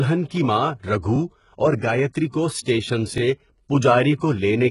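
The whole speech clip has a coarse, gritty top end that stops dead around 11.1 kHz. That's most likely heavy HE-AAC compression. The treble is rebuilt from lower bands rather than coded, so s sounds come out metallic and lispy, which fits a very low bitrate of about 12 kbps.

At 1.16 to 1.18 s there's a little stutter from overlapping chunks. Each 2-second chunk starts 20 ms before the previous one finishes, so that sliver plays twice at the join and you hear a quick click-and-repeat.

From 2.63 to 2.66 s you get pre-echo. A sharp attack sits late in a transform block, so the coding noise meant for the loud part spreads back over the 34 ms before it. You hear a brief hiss leading into a softened, smeared onset.

At 3.18 to 3.2 s the same overlapping-chunks stutter comes back, about 2 s after the first one. It's another 20 ms doubled at the next chunk boundary, with the same click and hiccup.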